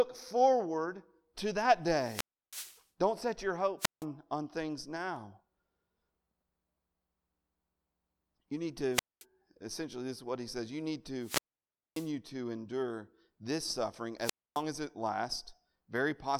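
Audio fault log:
1.91–14.63 s, wireless microphone squelch dropout: five times (1.91–2.85, 3.79–4.05, 8.93–9.25, 11.20–12.11, 14.19–14.63 s) hiss swells, then the speech drops to near silence for 0.32, 0.17, 0.22, 0.58 and 0.27 s before returning, as the FM radio signal fades until the receiver's squelch mutes the output.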